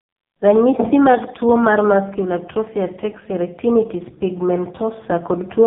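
The speech passed through an AMR narrowband mobile codec for its whole length, at a heavily starved setting that fits one of the lowest AMR-NB modes, around 5 kbps. Nothing above 3.8 kHz survives, so the voice sounds boxed-in, buzzy and strongly synthetic.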